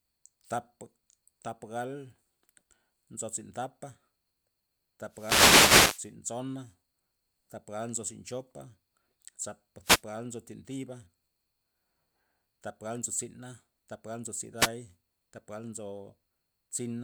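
Bursts of static swish across the speech at 5.09 to 6.13 s, 9.82 to 10.03 s, and 14.57 to 14.70 s just after "thap gal nzo". These are wireless microphone noise hits: the FM radio link fades as reflections cancel, letting receiver noise rise over the voice.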